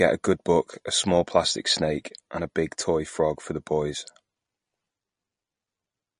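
MP3 compression damage runs throughout this speech clip. Nothing is heard above 10.5 kHz, where the encoder likely cut the treble to save bits, which fits a low bitrate near 40 kbps. Weak frequency lines flicker between frames, giving a plainly audible watery swirl.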